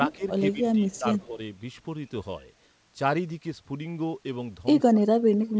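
Speech suppressed in double talk at 0.08–0.22 s: the voice dips by roughly 15 dB, likely because an echo canceller mistook simultaneous talk for loudspeaker echo and turned everything down. Echo leak at 0.12–0.16 s: a faint copy trailing by 133 ms, about 35 dB below the speech, likely residue the canceller failed to remove. The suppression returns at 0.53–1.06 s (about 15 dB), with leaked echo again at 0.91–0.98 s and, slightly louder at about 30 dB down, at 1.19–1.25 s. A shallower dip of around 10 dB follows at 1.26–1.39 s, and from 4.8 s to the end the voice sinks by roughly 30 dB.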